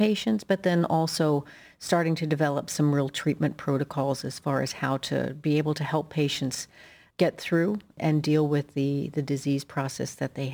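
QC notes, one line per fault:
Throughout: crude rate conversion. The speech was taken from 48 kHz to 44.1 kHz by dropping samples, with no filter. The dropped-sample pattern repeats and leaves inharmonic error tones roughly 30 dB below the signal. This is heard as a gritty fizz riding on loud and bright sounds.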